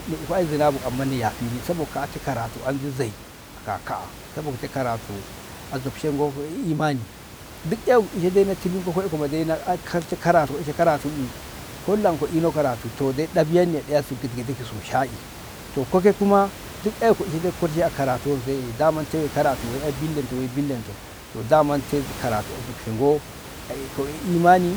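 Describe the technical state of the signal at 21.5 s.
At 21.5 s the speech signal is intact, with only the room's own background noise sitting about 15 dB below the voice.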